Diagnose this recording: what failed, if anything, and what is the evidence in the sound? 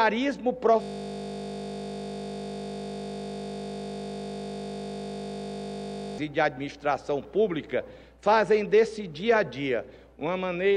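A system hang loop at the driver or buffer stage runs from 0.82 s to 6.18 s. The output locks onto one 20 ms slice of audio and replays it exactly, so the sound turns into a steady 50 Hz buzz rather than a stutter. That points to a frozen host while the hardware kept cycling a short ring buffer. Unlike mains hum, the buzz carries the clip's own timbre and stops abruptly when normal playback resumes.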